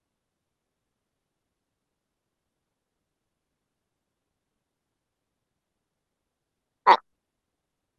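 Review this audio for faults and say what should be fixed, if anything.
Wrong sample rate throughout: the samples are played back at double their recorded rate without conversion, which fits 16 kHz audio run at 32 kHz, so the speech runs 2.0 times fast and sits 12 semitones (one octave) high. Resample to the playback device's rate, or tag the stream with its true rate, before output.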